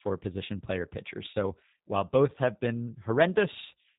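From start to finish the speech carries G.729 codec damage, plainly rough and synthetic, with nothing above 3.8 kHz, which fits 8 kbit/s G.729A rebuilding it from a few pulses per frame.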